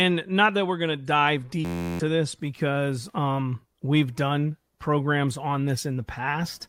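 From 1.65 to 2.00 s, just after "we're going to dive", a system hang loop occurs. Playback stalls while the hardware replays one 11.6 ms fragment, consistent with a 512-sample buffer, about 30 times, producing a steady 86 Hz buzz. Roughly 0.4 s of audio is lost before "this because um we've".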